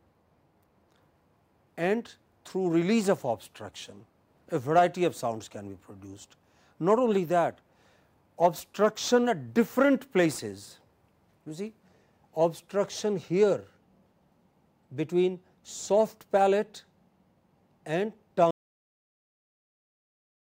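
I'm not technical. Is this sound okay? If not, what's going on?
No. At about 18.51 s the sound stops dead, partway through whatever it was doing. There is no fade or natural tail; it drops straight into complete silence, which lasts until the clip finishes. This is a cut-off end: the final stretch of audio was never saved or played back, so the recording simply ends in the middle of a sound instead of finishing on its own.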